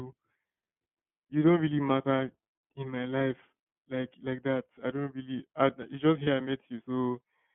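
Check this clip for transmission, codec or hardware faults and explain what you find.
Two faults are present: iLBC codec coloration across the whole speech clip, and one brief dropout from lost iLBC frames late in the clip.

The iLBC codec affects the entire clip. Band-limiting confines the sound to roughly 150 Hz to 3.4 kHz. The coding damage is plainly audible as a slightly rough, synthetic edge, which fits a 13.33 kbps stream coding each 30 ms frame independently. On a spectrogram there is an empty band above 3.4 kHz and a thin floor below 150 Hz.

Lost iLBC frames occur from 6.23 to 6.28 s, just after "really I it's just". The decoder fills the gap by repeating the last pitch cycle with added noise, which is consistent with one 30 ms frame going missing. It sounds like a brief held, buzzy vowel, and the speech is normal again right after. On the waveform, periodic cycles mixed with noise repeat across the gap. 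The spectrogram shows flat, frozen harmonics there.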